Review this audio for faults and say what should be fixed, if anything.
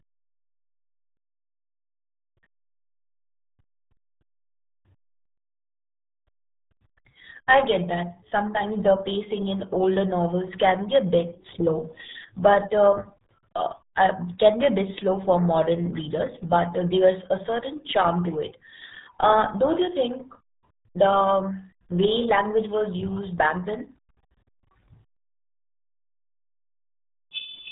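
The whole clip runs through the RealAudio 14.4 codec, and it shows: nothing survives above about 3.8 kHz, so the speech sounds muffled and gargly, with heavy coding damage that points to an 8 kbit/s dial-up-era stream squeezing out detail. Go back to the original recording, or re-encode it with a modern codec at a decent bitrate.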